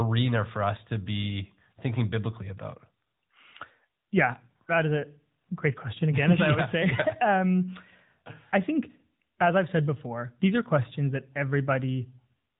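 Right from the start and all the way through, the speech carries the AMR narrowband mobile codec sound. Nothing above 4 kHz survives, and the vocal-tract model rebuilds the voice with a plainly audible buzzy, synthetic edge, which fits a mid-rate mode around 10 kbps.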